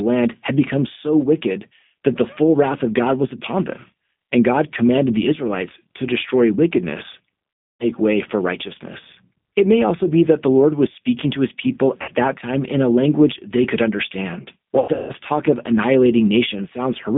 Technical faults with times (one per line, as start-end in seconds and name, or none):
0.00-17.17 G.729 codec
7.64-7.86 VoIP packet loss concealed by the speech codec
12.02-12.12 VoIP packet loss concealed by the speech codec
14.79-15.12 VoIP packet loss concealed by the speech codec